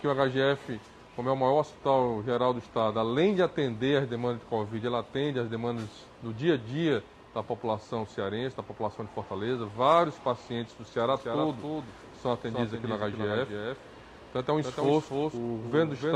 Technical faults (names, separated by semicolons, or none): doubled audio track